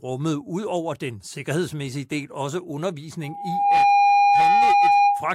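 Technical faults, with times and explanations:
3.23 to 5.35 s, loudspeaker feedback squeal: the microphone picks up its own loudspeaker, and at 811 Hz the loop gain exceeds one, so that single tone feeds on itself, swelling over about half a second to about 10 dB above the speech.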